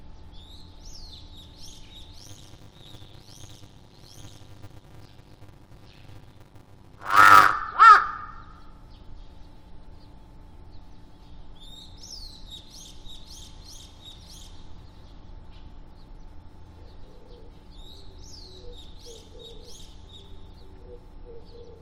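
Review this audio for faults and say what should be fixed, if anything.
From 2.18 s to 7.52 s there is a block size mismatch with zero padding. A steady 100 Hz buzz runs under the sound, and the audio plays at 0.533 times its normal speed while keeping about its normal pitch. This fits one stage writing 256-sample blocks into a stage that reads about 480, with the remainder of each block filled by silence. Regular 100 Hz gaps rule out random dropouts, and the unchanged pitch rules out a sample-rate mismatch. To prevent it, make both stages agree on block size, or buffer between them instead of padding.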